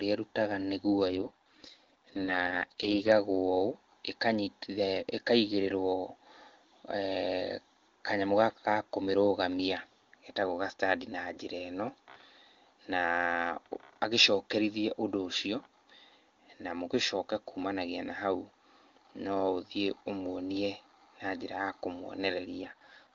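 From 1.06 to 3.12 s, and again from 22.62 to 23.14 s, an AMR rate drop forces the wideband codec from its clear top rate down to what sounds like 6.6 kbit/s. The band and continuity hold, but the speech turns rough and raspy before recovering.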